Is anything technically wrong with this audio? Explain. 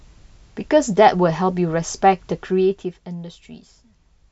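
Yes. From 2.35 to 3.04 s in this speech, a fine ticking, zipping buzz rides on the sound as the level falls by about 10 dB. This is zipper noise: the gain moves in unsmoothed jumps, around a hundred a second, and each jump leaves a tiny click.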